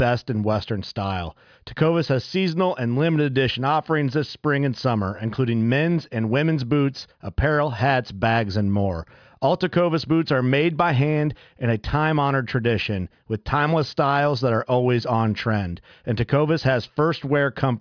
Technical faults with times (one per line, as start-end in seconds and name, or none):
none